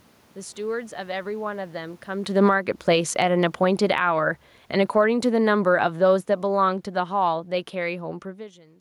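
From 2.22 to 4.13 s, and again from 4.76 to 8.06 s, automatic gain falling lowers the level by about 10 dB, then about 8 dB, as the gain control reacts to input it finds too loud or too noisy. Speech and room noise sink together. The waveform envelope tapers and the spectrogram dims evenly across all frequencies.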